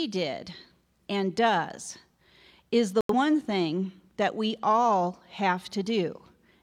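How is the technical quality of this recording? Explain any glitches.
One glitch affects the recording, a single short gap in the speech.

From 3.01 to 3.15 s, just before "thing that we all", there is a digital broadcast dropout. The receiver stopped getting valid frames and muted until good data returned. About 85 ms of speech, consistent with two lost frames, is missing. It sounds like an abrupt hole. A waveform shows a flat line there, and a spectrogram shows a blank vertical band.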